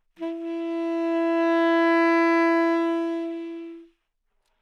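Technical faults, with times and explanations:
No technical faults can be heard in this sound.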